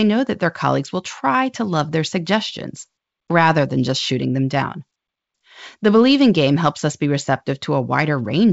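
No faults are audible in this speech, which comes through G.722 wideband telephone coding at 64 kbit/s with the band extending to about 7 kHz and any coding trace faint at most.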